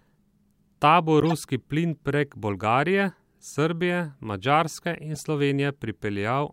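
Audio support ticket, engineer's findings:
Chirpy burst of wrong-frequency noise at 1.20–1.32 s, fairly loud, just before "plin prek". Second, shorter and quieter blip at 5.14–5.20 s. Corrupt frame decoded: flipped bits in compressed frames, played anyway by the decoder. Misread gains and codes put energy in the wrong bands. Lengths fit a few damaged frames in the first event and a couple in the second.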